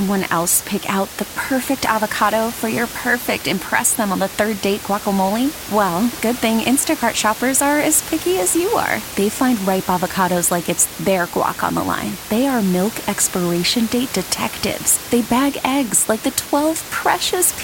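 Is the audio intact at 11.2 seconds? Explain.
Yes, the audio is intact at 11.2 seconds, with only the room's own background noise audible beneath the speech at about 13 dB lower, which is part of the recording rather than a fault.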